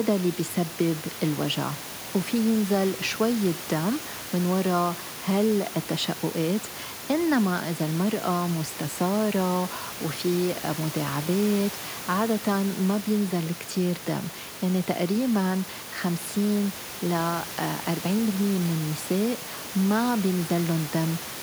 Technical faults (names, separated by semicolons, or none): none